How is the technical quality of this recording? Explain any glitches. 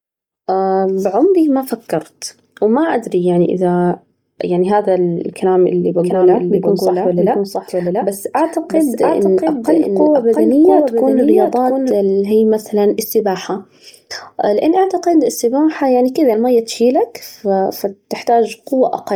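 The recording has two problems: heavy coding damage across the whole clip, and a stretch in the middle where the speech is heard twice.

Throughout, the speech has a breathy, grainy edge. This is the signature of Bluetooth LC3 compression, the likely cause. LC3 discards much of the upper spectrum and refills it with noise. The damage is heavy, which fits a low bitrate around 32 kbps with 10 ms frames. Unlike a plain low-pass, content extends to about 20.2 kHz, but that top end is synthetic hiss rather than detail.

From 5.99 s to 11.91 s, a doubled audio track appears. A second full-band copy of the speech trails the original by about 0.7 s, a few dB quieter. Two copies of the recording running out of step are the likely cause. It differs from room echo or reverb: there is one clean repeat with no decay, no room colouring, and no further reflections. The copy also cuts in and out abruptly at the edges of that span.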